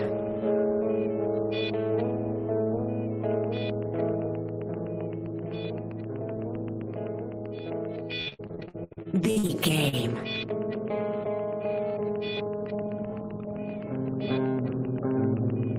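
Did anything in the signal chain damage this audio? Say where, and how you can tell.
Yes, at more than one stage. From 3.31 s to the end there is a train of clicks: near-identical pulses at a steady 7.7 per second, peaking roughly level with the programme. They tick through pauses as well as through active sound, so they were added on top of the signal rather than coming from it. Pulses this regular are most likely interference coupled into the analogue wiring or an interface glitching on a fixed cycle.

Between 8.21 s and 9.51 s the audio turns choppy. This is repeated packet loss, giving the robotic sound. Dropouts arrive in quick succession, the longest lasting 74 ms, and about 41% of that stretch is concealment rather than real audio. The receiver keeps extending the last fragment to fill each hole, so the sound repeats itself and parts of it disappear. That points to the network path, with the decoder's concealment covering the gaps.

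At 9.89 s there is one more short concealed packet loss. About 40 ms never arrived and was patched with roughly 38 ms of extrapolated sound that blends back into the real audio. It is heard as a brief smear just after the robotic stretch ends. This is the same network and jitter-buffer mechanism, caught by the concealer as a single isolated gap.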